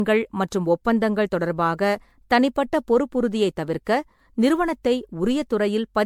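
Generation loss runs through the whole speech clip. The sound is swirly, smeared and hollow, with blurred consonant onsets and nothing above about 19.9 kHz. This is likely the result of repeated MP3 coding, around ten passes at a rate that fits 96 kbit/s. Each decode and re-encode lands on a shifted frame grid and quantises again, so noise and spectral gaps pile up beyond what a single encode would leave.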